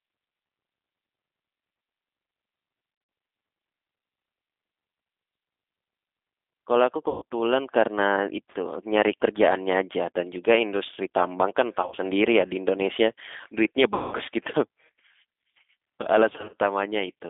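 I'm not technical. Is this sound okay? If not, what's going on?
No. The whole recording has a thin, slightly rough and artificial quality. That is the G.729 codec, a phone-call compression method that rebuilds speech from a simplified model of the voice and keeps only a narrow band, roughly 250 Hz to 3.6 kHz.

There are also five short moments where the speech turns buzzy or smeared and fades: 2.9 to 3.1 s, 7.09 to 7.23 s, 11.82 to 11.98 s, 13.94 to 14.15 s and 16.30 to 16.55 s. This is VoIP packet loss concealed by the speech codec. Pieces of the call went missing, and the decoder filled each gap by stretching out the last sound it had.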